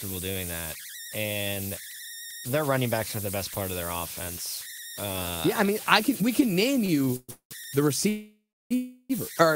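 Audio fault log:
throughout: converter idle tones, a whistle around 2 kHz about 11 dB below the speech, grainy under quiet passages; not tied to dropouts.
6.85–7.53 s: repeated stalls (stutter) after "can we can name", four short holds up to 200 ms filling 373 ms; dragging, choppy speech rather than one long halt.
8.09–8.73 s and 8.75–9.12 s: call audio freeze before "or the", 618 and 350 ms held, fading to silence for 320 and 50 ms, likely packet delay; then resumes intact.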